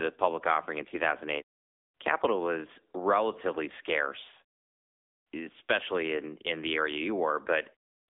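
From start to finish the speech carries AMR narrowband mobile codec damage. The sound is confined to a phone-line band of roughly 250 Hz to 3.6 kHz, with nothing above 3.7 kHz. A simple band-limiting filter would only muffle the audio. Here the voice is also plainly buzzy and synthetic, because each 20 ms frame is rebuilt from a vocal-tract model driven by sparse pulses. That coarseness points to an AMR-NB mode of around 8 kbps.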